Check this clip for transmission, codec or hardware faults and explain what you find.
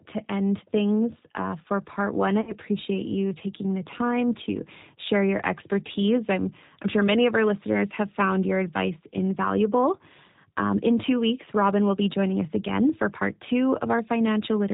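Two faults are audible: codec damage through the whole speech clip and one short dropout that has been patched over.

Throughout, the speech sounds muffled, with nothing above 4 kHz, and slightly rough and synthetic. This is G.729 codec damage. The 8 kbit/s coder rebuilds each 10 ms frame from a vocal tract filter, a pitch predictor and a few pulses, so fine detail is lost.

From 2.41 to 2.56 s, between "for part one I" and "you taking the time", the speech smears into a buzzy tone or coloured noise that fades, and stays weak or distorted briefly afterwards. This is VoIP packet loss concealed by the speech codec. About 60 ms went missing, which fits two lost packets. The decoder extended its last pitch and filter at falling gain, and later frames took time to recover.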